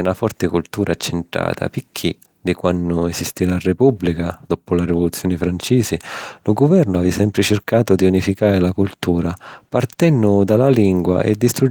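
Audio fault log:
The speech carries Opus voice compression in its hybrid mode, with the band reaching up to about 20.2 kHz and only light coding damage that fits a rate of around 24 kbps, and no fault events appear anywhere in the signal.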